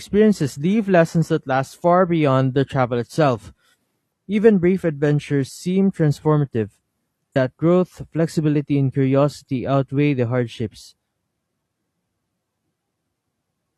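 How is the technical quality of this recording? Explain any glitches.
The recording has one clear glitch. Between 7.32 and 7.36 s the speech jumps abruptly forward, with a short blip just before "growth flexibility and curiosity." This is likely a stream segment skipped: one chunk of the segmented stream failed to arrive, so playback resumed at the next segment and a stretch of the programme is simply gone. On a waveform the envelope is cut and resumes with a brief spike. A spectrogram shows a thin vertical broadband line where the formant tracks break off and restart.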